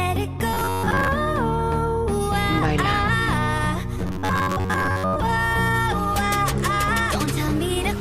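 From 0.54 to 1.09 s and again from 3.99 to 5.16 s, the audio takes on a rigid, metallic buzz pitched at 93.8 Hz, the robotic sound from repeated short buffers. The likely cause is that fresh audio arrives too slowly and the playback side fills the gap by looping the most recent chunk, repeated for most of each stretch while the real material is skipped. A 93.8 Hz buzz corresponds to a period of about 10.7 ms, which fits a buffer of that length being replayed.

From 5.28 to 6.71 s, GSM signalling bursts appear: a galloping dit-dit-dit of short buzzes at 217 Hz, sitting roughly 20 dB below the wanted sound. A nearby 2G phone transmitting short groups of signalling bursts couples radio energy into the audio circuitry, which rectifies it. The 217 Hz rate follows the handset's transmit timing.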